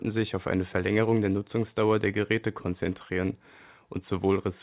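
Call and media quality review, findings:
No faults found in the speech; the call path is band-limited with nothing above 4 kHz, which fits G.711 A-law at 64 kbps.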